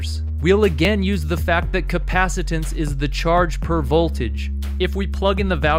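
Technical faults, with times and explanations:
0.85 s, dropped buffer (overrun): the likely cause is the capture software falling behind and failing to collect a block of samples before the hardware wrote over it, so that stretch never reached the recording and the audio on either side was spliced straight together. Roughly 10 ms of sound is missing, with no gap of silence in its place. The abrupt join produces a small forward jump in the sound.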